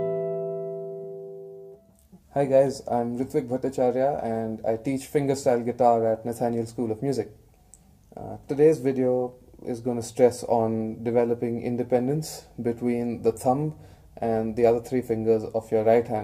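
Between 9.19 and 9.46 s there is a short run of CD scratch ticks: three brief ticks, the longest roughly a millisecond. A blemish on the disc surface wiped out more data than the player's error correction could rebuild, so it filled or muted the damaged samples at that point. Because the damage returns with each rotation of the disc, the ticks come at a steady rhythm rather than scattered at random like dust clicks on vinyl.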